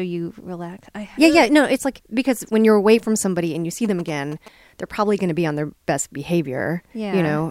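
A galloping run of short 217 Hz buzzes cuts across this speech from 3.85 to 4.48 s, after "somebody and you see" and before "they're probably going to", roughly 20 dB below the voice. These are GSM signalling bursts: a nearby 2G phone's brief radio bursts, rectified by the audio circuitry.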